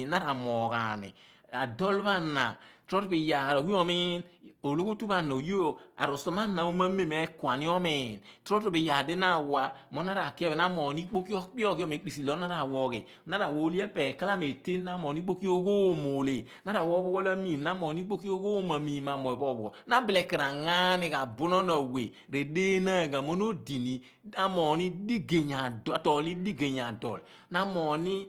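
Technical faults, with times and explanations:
Throughout, Opus compression: speech turns grainy and rough, likely CELT-mode band filling at a rate fitting 24 kbps; spectrogram shows speckled, noisy highs without gaps.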